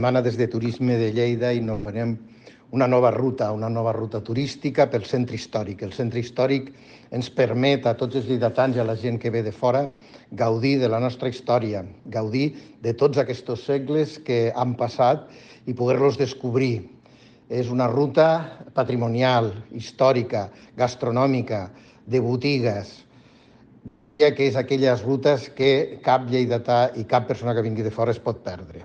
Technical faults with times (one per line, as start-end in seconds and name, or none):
1.73-1.87 burst of packet loss
9.85-10.03 long network dropout
23.87-24.21 long network dropout